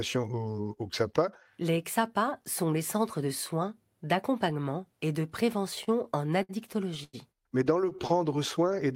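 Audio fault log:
5.75–6.51 s, repeated stalls (stutter): packets arrived later than they were due, so the jitter buffer emptied seven times in this stretch. Each time, the receiver extended the last sound until data caught up, covering about 135 ms in all, with the longest hold 63 ms and nothing lost. The sound drags and hiccups. On a spectrogram, short flat smears repeat the preceding frame; the waveform shows repeated, slightly faded copies of one cycle.
7.04–7.15 s, short stall from a late packet: a single packet missed its slot and the buffer ran dry. The receiver held the last sound for about 96 ms, then resumed exactly where it had stopped, so nothing is missing and the sound is only prolonged. This produces a brief drawn-out tone with a faint buzz or dip. A spectrogram shows one horizontal streak of frozen harmonics, and the waveform shows a short run of near-identical repeated periods.
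7.81–8.37 s, repeated stalls (stutter): a second run of late packets caused six brief underruns. They were shorter, with the longest 12 ms and about 48 ms concealed in total, and the sound drags and stutters. Nothing is lost. A spectrogram shows thin vertical seams where frames are duplicated, and the waveform shows small repeated fragments spliced between the normal cycles.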